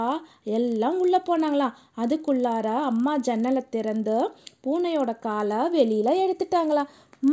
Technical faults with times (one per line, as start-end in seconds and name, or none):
0.00-7.33 resampler restarted on every block